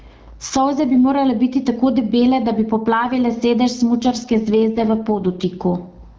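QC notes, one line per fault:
Throughout, gain pumping: the level is pulled down on every loud sound, squashing loud and soft parts closer together, a swing of around 25 dB, most likely from input gain set far too high with a fast limiter clamping down.
4.01 to 5.5 s, AMR rate drop: the voice goes rougher and more synthetic with no gap or loss of bandwidth, which fits the codec falling from 12.65 to 6.6 kbit/s on a weak link.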